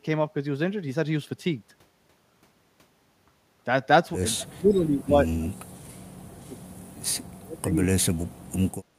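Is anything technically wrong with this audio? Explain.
Yes, two kinds of problem show up in this speech. First, speech suppressed in double talk, from 4.34 to 6.6 s and again from 7.35 to 8.23 s. The voice sinks hard, down by about 40 dB at its worst, for around two seconds in the first stretch and well under a second in the second. The likely cause is an echo canceller hearing both ends talk at once, failing to tell its own talker from the far-end echo, and ducking everything.

Second, a short echo leak from 4.71 to 4.81 s, right inside that first suppressed stretch. A faint, delayed copy of the voice slips through about 213 ms late, sitting about 25 dB under the speech. It's likely a loudspeaker-side canceller not fully cleaning up what its mic picked up and sending that remainder back.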